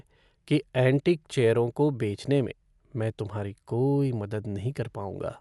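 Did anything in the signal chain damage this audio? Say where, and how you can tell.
Yes, at the codec stage, likely Dolby Digital compression. Throughout the speech nothing survives above 11.5 kHz, and the sound is dull, with rough, fluttering noise around tonal parts. That fits a low bitrate near 64 kbps, where starved frequency lines get filled with dither noise. A plain low-pass filter would leave no such fluttering noise.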